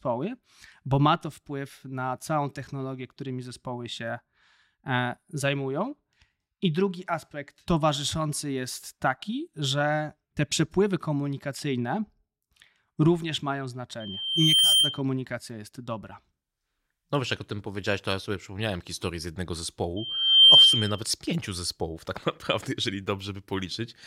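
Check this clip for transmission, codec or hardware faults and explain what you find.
The speech has loudspeaker feedback squeal, twice. The first runs from 14.00 to 15.02 s, after "również mają" and before "jest dobra". The second runs from 19.96 to 21.04 s, after "przypomniałem historię z jednego" and before "z pięciu zespołów tak". Both are a pure tone at 3.1 kHz. It swells over roughly 0.7 s, then 0.5 s, and peaks about 10 dB, then about 15 dB, above the speech. A microphone was hearing its own loudspeaker, and the loop gain passed one at that frequency.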